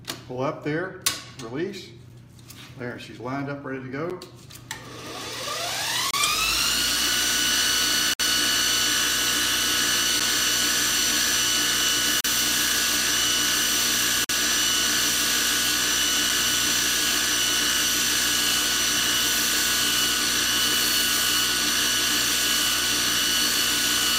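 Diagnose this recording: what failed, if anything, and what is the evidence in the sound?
The failure is at playback, where stream segments are joined: a gap between stream segments. Hard-edged silent holes fall at 4.10 s, 6.11–6.14 s, 8.14–8.20 s, 10.20 s, 12.21–12.25 s and 14.24–14.29 s, roughly 9 to 60 ms long and spaced about every 2 s, which fits 2-second segments whose time stamps don't meet. The player pads each mismatch with silence. Unlike packet loss or a dropout, nothing is missing. The sound resumes exactly where it stopped, just delayed.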